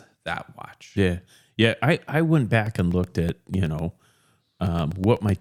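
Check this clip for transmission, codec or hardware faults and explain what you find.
One hardware fault is present: periodic USB or driver dropouts. From 2.54 s, right after "I I went", to 5.29 s, roughly a millisecond of speech vanishes every 0.125 s. A background task blocks the USB bus or driver, and each gap is filled with silence. About twenty regular ticks result.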